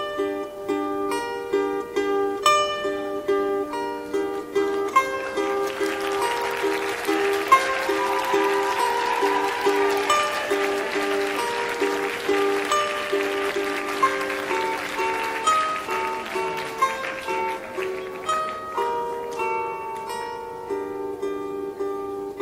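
No technical faults can be heard anywhere in the audio, which carries through without interruption, level jumps, distortion or other disturbance.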